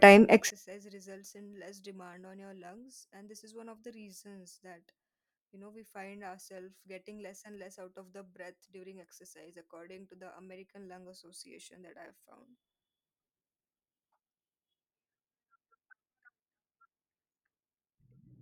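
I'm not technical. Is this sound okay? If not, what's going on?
No. From about 0.50 s until the end, the speech almost disappears when the two stereo sides are combined into one, leaving only a faint trace. The likely cause is one channel inverted, meaning one side's signal is flipped upside down. The voice sits equally in both sides, so when they are added together the two copies cancel each other out, and only the small differences between the sides remain audible.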